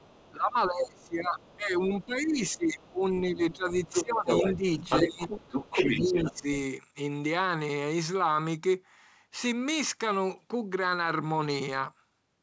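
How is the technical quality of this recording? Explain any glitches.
The quality is pretty rough for the first six and a half seconds: there's echo leaking in, the talker getting ducked, and one digital pop. The wideband phone sound itself, with audio reaching up to 8 kHz, comes across cleanly.

Other side's voice leaking through shows up at 0.0–0.32 s, 1.39–1.56 s and 2.01–2.91 s, faintly at first (about 35, then 30, then 25 dB below the talker). From 3.51 to 6.4 s it gets as loud as the talker. That's likely an echo canceller failing to strip the far end's loudspeaker sound from the mic, so a second voice rides along underneath and then alongside.

Speech suppressed in double talk covers most of 0.32–4.65 s, about three seconds in total, plus 5.05–5.3 s and 5.71–6.47 s. The talker drops by up to about 20 dB in the first two stretches and about 10 dB in the last, so the voice sags and thins in patches. 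The likely cause is the canceller hearing both sides at once and, unable to tell them apart, turning everything down.

Bit errors on an ADPCM link show up at 6.06 s as a brief pop with a rough little tail, at a rate of roughly 0.2 percent. In an ADPCM stream like the G.722 used here, a flipped bit knocks the decoder's step size and prediction off course, so the damage rings on for a few milliseconds instead of staying a single click.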